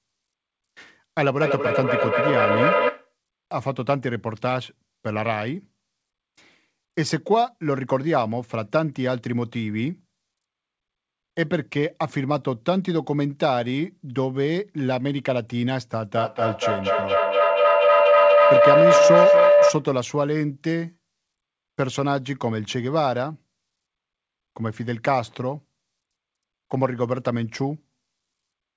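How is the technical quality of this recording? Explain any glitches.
The recording has two feedback faults from a second device in the room. The call path leaves nothing above 8 kHz, which fits G.722 at 64 kbps.

From 1.40 to 3.15 s there is feedback echo between two devices. One device plays the other's audio, and that microphone picks it up again. Its echo canceller ignores sound from the other device. The sound returns roughly every 200 ms, thinner and ringing, peaking about 2 dB above the speech.

From 16.15 to 19.94 s there is a feedback howl. Here the loop gains level on each trip instead of fading. The repeats narrow to one tone, roughly 500 Hz. The loop comes round roughly every 200 ms and the howl reaches about 7 dB above the speech.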